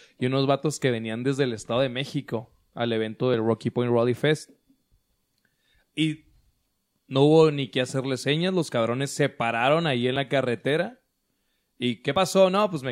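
At 3.34 s after "al evento", 10.16 s between "se pararon ahí en" and "la carretera", and 12.16 s, the speech jumps ahead, likely from a dropped buffer (overrun) losing roughly 10 to 30 ms.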